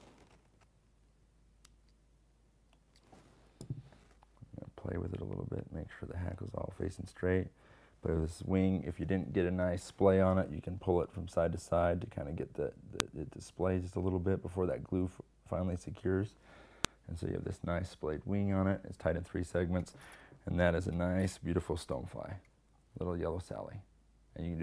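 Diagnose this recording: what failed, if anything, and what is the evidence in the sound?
File header played as audio, a storage and file-assembly fault: sharp, loud snaps at 13.00 s and 16.85 s mark where separate WAV pieces were joined with their header bytes left in and played as samples. Unlike dropout or buffer-underrun clicks, neither snap brings a gap or muting.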